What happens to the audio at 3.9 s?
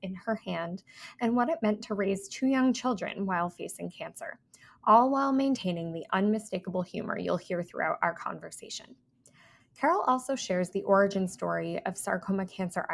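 Nothing goes wrong at 3.9 s; the audio there plays through intact, with no dropout, glitch or distortion.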